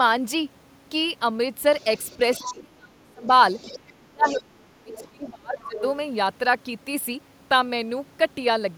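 A faint second voice, about 15 to 20 dB below the speech, sounds from 1.8 to 2.54 s, 3.25 to 3.79 s, 4.27 to 4.41 s, 4.93 to 5.03 s and 5.58 to 5.82 s. This is the other side's voice leaking through, likely loudspeaker echo the canceller left behind. Overlapping these stretches, the speech sinks by some 30 to 35 dB from 2.18 to 3.24 s, 3.77 to 4.43 s and 4.83 to 5.81 s. That is speech suppressed in double talk, likely the canceller ducking both voices at once.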